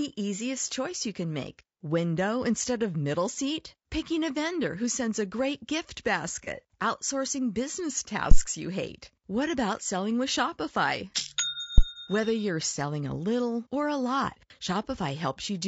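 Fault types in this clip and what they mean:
Low-delay AAC compression: The whole speech track has a rough, grainy texture, with noise filling the gaps between harmonics and a thin, slightly synthetic top end. That's the likely fingerprint of AAC-ELD, the low-delay codec used in video calls. Its short frames can't resolve pitch harmonics finely and spend more bits doing it. At a rate that sounds like roughly 32 kbps, the damage is plainly audible throughout.
AAC frame loss with concealment: Around 6.44 to 6.48 s there's a brief smeared, noisy patch where the decoder lost a chunk of the stream, about 30 ms, which fits a single dropped frame. It covered the hole by rebuilding from the last good spectrum. That patches the gap but leaves a short phasey blur instead of clean speech. It's too short to fade toward silence.
Phantom power thump: Two low thumps land at about 8.31 to 8.42 s and 11.78 to 11.84 s. 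They're what you get when phantom power or a similar supply is switched on a live input and the voltage step kicks through the coupling capacitors. Here they're quick: the first dies away over about 23 ms and the second over about 13 ms, so they read as dull knocks under the speech.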